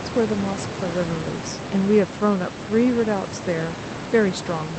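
Nothing is technically wrong with this speech recording.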